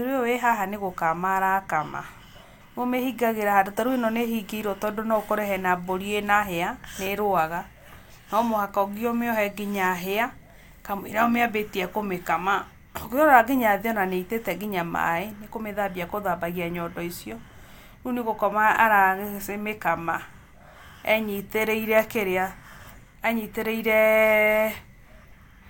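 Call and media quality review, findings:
No audible faults found in the speech recording; nothing to raise against any component.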